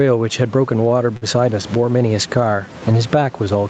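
Gain pumping runs through the whole recording. The level swing is around 15 dB. Loud and quiet parts sit close together, so the sound feels squashed. The likely cause is input gain set far too high, with a fast limiter or compressor clamping down on each peak and releasing in the pauses.

From 0.77 to 1.24 s there are repeated stalls, heard as stutter. Packets arrived late, and the jitter buffer ran dry four times. Each time, the receiver stretched the last sound to cover the gap. The fills add up to 82 ms, and the longest gap is 49 ms. Nothing is lost. The speech drags and hiccups through this stretch.

From 2.66 to 3.45 s a jitter buffer slow-down is audible. The buffer needed more reserve, so the receiver repeated single pitch periods and slivers of pause. This adds 87 ms. The speech plays at about 90 percent speed with its pitch unchanged. Sounds are drawn out.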